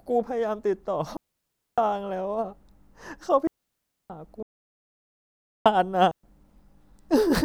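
The speech drops out in clean holes at 1.17 to 1.78 s and 3.47 to 4.10 s, each about 0.6 s. That's a digital wireless dropout: the link lost too much data and the receiver muted with a quick fade and no noise burst on either side. Then from 4.43 to 5.66 s there's a 1.23 s audio dropout to silence. The sound cuts mid-flow to silence with no room tone, likely a lost input while recording carried on. A last short wireless mute lands at 6.11 to 6.23 s, about 0.12 s.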